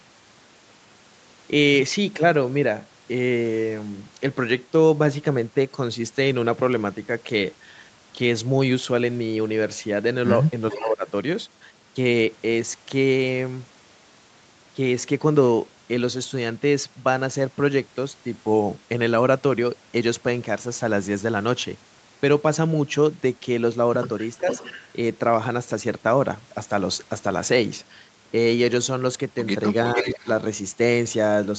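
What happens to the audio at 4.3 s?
Nothing goes wrong at 4.3 s; the audio carries on intact through that moment, with only the band-limited sound of the call path, which stops at about 8 kHz.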